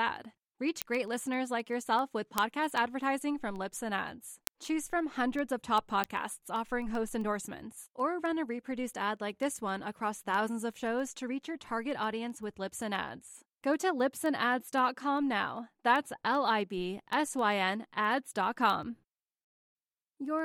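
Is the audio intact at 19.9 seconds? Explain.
No. At 19.9 seconds you're still inside a run of word clock ticks that goes from about 0.17 s to 20.39 s. The receiving device is running on its own clock instead of locking to the sender's, off by something like a couple of hundred parts per million. Every time the two clocks slip past each other, a single sample gets dropped or repeated. You hear that as a sharp tick about seven times a second over the speech, roughly 150 of them in total.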